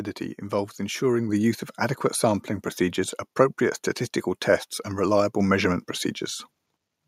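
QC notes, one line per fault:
1.29 s and 5.40 s, microphone volume stepped up: the speech and the room noise behind it jump louder together in a single step, by about 6 dB and then about 4 dB more, because the input volume of the microphone was raised at once.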